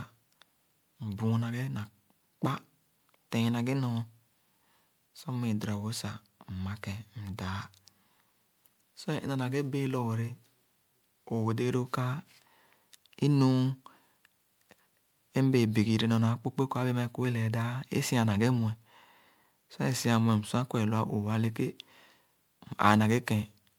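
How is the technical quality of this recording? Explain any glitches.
The technical quality is limited by one fault present for the whole recording. The speech has a swirly, hollow, smeared character, with consonant attacks blurred, and nothing above 20.9 kHz. This is generation loss, likely from repeated lossy coding. The sound points to MP3 at around 128 kbit/s, decoded and re-encoded about five times, each pass quantising on a shifted frame grid so noise and spectral gaps accumulate.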